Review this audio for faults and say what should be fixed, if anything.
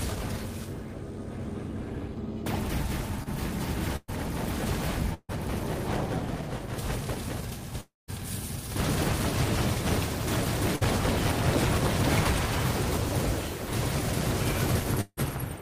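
At 3.23 to 3.28 s there is a short concealed packet loss. About 20 ms of audio never arrived in time, and the decoder covered roughly 27 ms by extending the preceding sound before crossfading back into the real signal. It comes through as a brief smear or wobble rather than a gap, and whatever sat in that sliver is gone. A slightly deeper jitter buffer would let late packets arrive before their playout deadline.

Three bursts of packet loss follow, at 3.96 to 4.10 s, 5.14 to 5.31 s and 10.76 to 10.83 s, losing about 120 ms, 140 ms and 60 ms respectively. In each, the receiver carried the last sound forward while attenuating it, giving a held buzz or fading hiss. The first two decay into about 20 ms and 40 ms of silence before audio resumes further along. Forward error correction or redundant packet encoding would let the receiver rebuild these runs of lost packets.

The gaps at 7.81 to 8.10 s and 15.01 to 15.19 s sound like a long network dropout, the likely cause being a stall in the connection itself. 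About 280 ms and 160 ms are missing. Concealment fills the start of each with a decaying continuation, then leaves about 180 ms and 50 ms of silence before the signal returns past the lost section. A more stable network path, such as a wired link instead of congested wireless, would prevent these outages.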